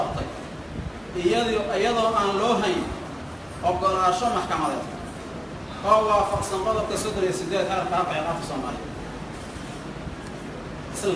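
Aliasing runs through the whole clip. The sound was resampled to a lower rate without a proper anti-alias filter first. The result points to a drop from 48 kHz to about 22 kHz. Anything above the new limit of 11 kHz folds back down to false frequencies. These mirrored components sit roughly 25 dB below the main signal. They make the high end gritty and metallic. The spectrum stays full right up to the 11 kHz edge.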